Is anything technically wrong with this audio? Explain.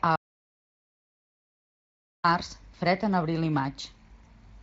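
Yes, there's an audio dropout to silence from 0.16 s to 2.24 s, a gap of about 2.1 s. The input was likely lost, through a disconnect or a stray mute, while the recorder kept writing silence, so everything there is gone and even the room tone vanishes before "març fred en abril" picks up mid-flow.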